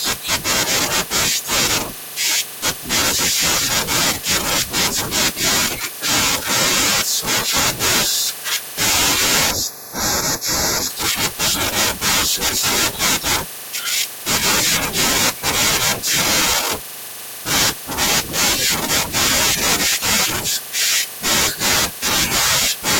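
From 9.51 to 10.90 s you get channel delay, comb filtering: one channel runs late by a tiny fraction of a millisecond, and summing to mono cancels shared content at evenly spaced frequencies, first notch around 3 kHz. The speech goes hollow and phasey there.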